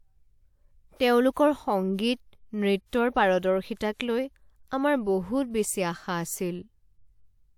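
A short hiss smears in just before sharp onsets at 1.31–1.36 s, 3.74–3.77 s and 4.68–4.71 s. This is pre-echo: the codec's block-wide quantisation noise leaks ahead of each attack.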